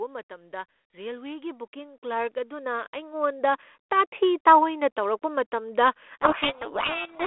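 From 0.28 s to 4.49 s the speech and the background noise behind it swell together, climbing steadily by about 15 dB until the level settles just before "ꯇꯥꯑꯣꯏꯅ ꯇꯧꯔꯛꯄ ꯃꯇꯝꯗ". This is automatic gain rising: the gain control judged the incoming signal too quiet and kept turning it up over several seconds. Because it boosts everything it receives, the noise floor rises in step with the speech.

Right after "ꯇꯥꯑꯣꯏꯅ ꯇꯧꯔꯛꯄ ꯃꯇꯝꯗ", from 6.22 s to the end at 7.27 s, the speech is buried under harsh, grinding distortion. This is a codec payload misread. The narrow telephone band and light coding grain point to G.726 ADPCM, probably at 32 kbit/s, and here the bit order within each code word was read differently from how it was written. The decoder therefore applies wrong difference values, and its adaptive prediction drifts into noise until both ends agree again.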